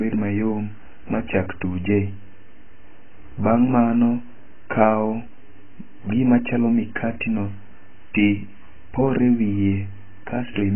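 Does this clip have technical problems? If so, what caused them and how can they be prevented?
Yes. Throughout the clip the speech was likely passed through AAC compression at a very low bitrate, around 12 kbps with AAC-LC. The encoder threw away everything above 3.1 kHz and coarsely quantised what remained, so the speech sounds dull, muffled and smeared, with a warbling, watery texture. Encoding speech at 64 kbps or higher would prevent it.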